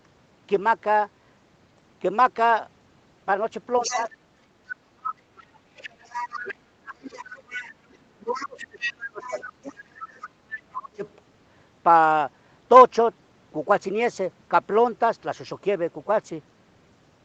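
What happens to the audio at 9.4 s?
At 9.4 s two faults overlap. The other side's voice is leaking through from 7.06 to 11.1 s. The loudspeaker playback reaching the microphone was likely not fully removed by the echo canceller, so a second, fainter voice sits roughly 15 dB below the talker. Speech is also suppressed in double talk from 8.19 to 9.92 s. With both sides active, the canceller likely turned down everything, and the talker's level dips by as much as about 25 dB in pieces totalling around a second and a half.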